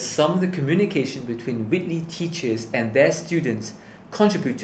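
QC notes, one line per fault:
No faults heard; the speech runs through the call microphone processing and WebRTC call path as expected, with nothing above 8 kHz, which fits a wideband Opus setting.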